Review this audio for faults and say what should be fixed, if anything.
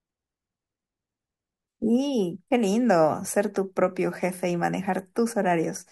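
Sample clock jitter affects the speech from 0.0 to 2.91 s. The converter's clock wanders by a couple of microseconds, so samples land slightly off time, leaving roughness some 40 dB below the signal. Unlike steady hiss, it swells on loud, bright sounds and vanishes in pauses. Prevent it by clocking the converter from a clean, low-jitter reference.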